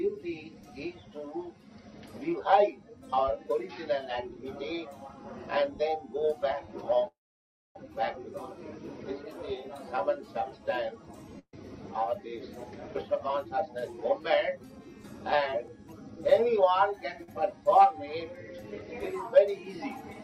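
At 7.07 s the sound stops short. A brief fading buzz or hiss carries the last moment on, then about 0.61 s of silence follows before the audio picks up again at 7.76 s. Nothing seems to be skipped; the continuation lands exactly where it left off, just late. This is a call audio freeze, likely from packets held up in transit so the jitter buffer drained. The receiver padded roughly 0.68 s, leaving playback that much further behind.

From 11.39 to 11.54 s a burst of packet loss cuts in. The final sound before it is stretched into a held buzz or hiss that dies away, with about 60 ms of near-silence, and then the audio jumps forward. Around 140 ms of material has vanished. Several packets in a row were lost or arrived too late to use, and the receiver concealed the hole by extending and fading the last sound.

Between 12.40 and 16.17 s the audio runs noticeably quicker, about 110 % of normal pace, while the pitch holds steady, giving it a rushed, pressed-together feel. 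This is a jitter buffer speed-up. With more audio buffered than its target, the receiver repeatedly removed tiny slices, each one or a few pitch cycles long, trimming around 0.4 s in total to pull the delay back down.

At 17.23 to 17.29 s a sound is held a touch too long, with a faint buzz or dip, before continuing seamlessly. This is a short stall from a late packet. The expected packet had not arrived in time, so the receiver stretched the preceding sound by about 47 ms until it turned up, adding delay without losing any content.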